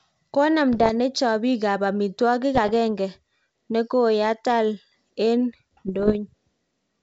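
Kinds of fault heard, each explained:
Bit errors on an ADPCM link: flipped bits in the coded stream throw the decoder's step size and predictor off, so each error keeps ringing for a few milliseconds instead of staying a single click. Here it causes rough, popping bursts with brief jumps in level around 0.73 to 0.91 s, 2.55 to 2.72 s and 5.87 to 6.17 s, on a wideband link that points to G.722. Packet loss would leave gaps or smeared repeats, not this gritty ringing.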